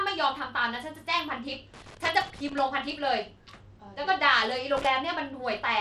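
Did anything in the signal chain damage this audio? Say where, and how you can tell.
Yes. Gritty, coarse treble throughout suggests the codec stage, likely Bluetooth SBC compression at a low bit pool, starving the upper sub-bands and quantising the rest roughly.

Irregular scratchy bursts at 1.74 to 2.59 s and 4.77 to 4.87 s come from the analogue wiring: loose connector crackle, a contact intermittently breaking the signal.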